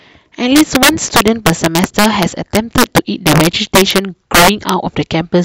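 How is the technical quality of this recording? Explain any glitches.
The recording is marred by one fault. Integer overflow runs throughout: with the signal driven about 9 dB too hot, each peak that exceeds the integer limit wraps to the opposite sign instead of being held there. A small share of samples, roughly 2 percent, are affected, so the louder speech bursts break into violent, sharp cracks far harsher than ordinary clipping.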